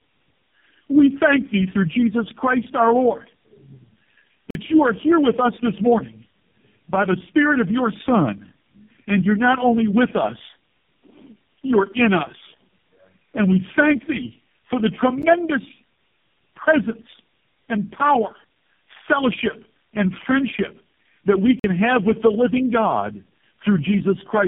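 From start to finish the speech carries tandem speech coding. It has passed through three speech codecs in a row: GSM full rate at 13 kbit/s, G.729A at 8 kbit/s and finally AMR-NB at 5.9 kbit/s, with G.711 links between them. Each coder re-encoded the previous one's already damaged output, so the errors stack. The result is rougher, noisier, more muffled and warbly than any single one of those codecs would sound, with nothing above 3.6 kHz. That buildup is what separates it from one low-bitrate codec.

Three blocks of digital silence break into it. From 4.51 to 4.55 s and again from 21.60 to 21.64 s, the audio drops out for about 46 ms, which fits a 2048-sample output buffer that wasn't filled in time. Each is heard as a short hole. At 15.22 s a shorter 12 ms block comes across as a tick or dip rather than a gap. Unlike packet-loss concealment, nothing fills these holes: the sound stops and returns with no fade.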